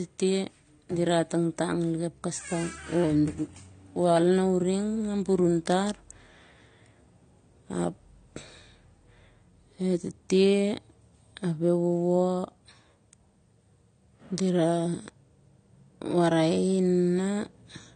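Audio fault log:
throughout, transcoding between lossy codecs: nothing above 9 kHz, and two different flavours of swirly, smeared artefacts sit on the speech. It's likely a low-bitrate AAC pass, something like 32 kbit/s, later re-encoded to MP3 around 97 kbit/s, which keeps the first cut-off and adds its own damage.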